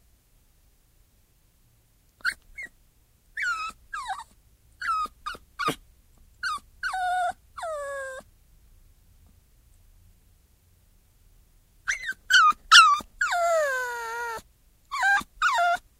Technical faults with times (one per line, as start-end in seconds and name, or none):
none